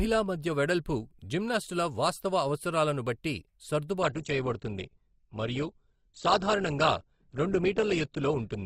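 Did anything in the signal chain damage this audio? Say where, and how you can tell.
Yes. From 4.02 s to the end, the speech loses everything above 8.2 kHz and turns smeary, which points to an adaptive stream at a lower bitrate, roughly Opus 64 dropping to 12 kbit/s, as the network slowed. The switch is sudden and gapless, unlike a dropout.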